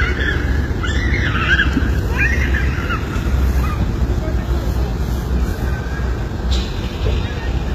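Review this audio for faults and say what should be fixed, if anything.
The whole clip has damage most likely from HE-AAC compression at a very low rate. The damage is consistent with a bitrate near 20 kbps. The encoder seems to have kept only the lower spectrum and synthesised the treble by copying lower bands upward under a coarse envelope. The top end reaches higher than plain AAC would at that rate but is not the original. Harmonics fail to line up across the crossover, so high detail sounds gritty and metallic, and nothing remains above 14.9 kHz. Encoding at a higher bitrate, or with full-band AAC or a lossless format, would prevent this.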